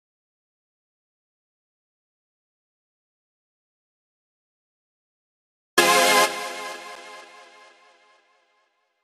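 At 6.96 s there is a block of digital silence lasting about 8 ms. The samples drop straight to silence and return with no fade. The short gap is heard as a single tick. A buffer not filled in time is the usual cause.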